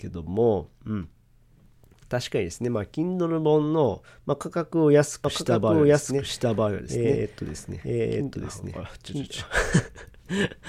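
From 5.24 s to 9.46 s the speech is heard twice at once: a second, full-band copy trails the original by about a second, at roughly the same loudness, with no decay or added room colour, and it cuts in and drops out abruptly at those points. This is a doubled audio track, likely caused by the same signal being captured again through a slower path, or an edit leaving two out-of-step copies mixed together.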